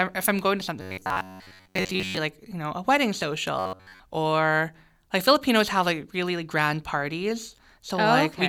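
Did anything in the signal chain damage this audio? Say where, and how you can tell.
Yes. Robotic sound from repeated short buffers appears at 0.82–2.17 s, after "if I'm going to", and again at 3.59–4.00 s, after "you know a wedding". A rigid 93.8 Hz buzz replaces most, then all, of the speech. The cause is likely buffer starvation, with the playback side looping a roughly 10.7 ms block.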